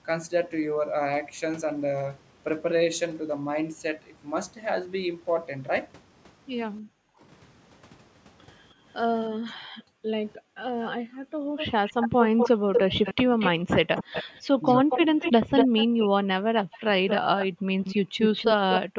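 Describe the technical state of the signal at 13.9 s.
At 13.9 s three faults overlap. The first is background gated by the echo canceller, which runs from 6.81 to 18.97 s. While the far end's audio plays through the loudspeaker, the canceller pulls the microphone down hard, by as much as about 40 dB, for roughly a second and a half in total. The room tone drops out and then returns. On a waveform the noise floor collapses to near-flat gaps, and a spectrogram shows vertical bands where the background texture goes almost black.

An echo leak spans 8.92 to 18.8 s. A delayed copy of the speech follows the original by 236 ms, at a level only slightly below the direct voice. The likely cause is a loudspeaker-side canceller that failed to remove what its microphone picked up and sent back. It sounds like a delayed double of the voice. On a spectrogram the same harmonic patterns repeat about a quarter-second later, and the waveform shows secondary bursts trailing the original syllables.

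Speech suppressed in double talk occurs between 11.28 and 17.66 s. While both sides talk, the talker's voice dips, loses its top end or cuts out in fragments, adding up to around half a second and dropping by as much as about 40 dB. The likely cause is the canceller treating overlapping speech as echo. This shows as abrupt notches in the speech envelope and upper harmonics vanishing from the spectrogram mid-word.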